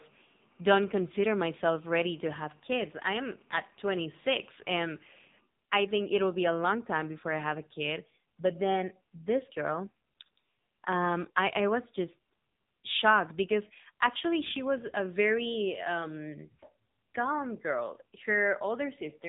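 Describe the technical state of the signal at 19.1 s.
At 19.1 s the speech carries AMR narrowband mobile codec damage, present across the whole clip. Nothing passes above 3.8 kHz, and the vocal-tract model, starved of bits, renders the voice heavily buzzy and synthetic, which fits a low rate around 6.7 kbps.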